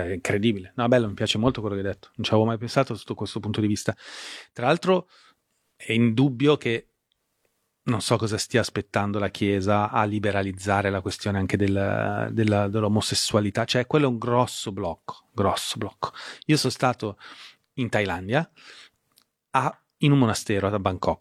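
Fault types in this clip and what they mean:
Nothing to list here, since no technical faults turn up anywhere in this speech recording.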